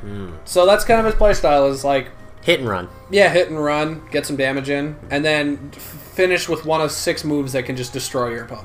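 Nothing goes wrong at any point here; there's simply no technical fault to pick out anywhere in the recording.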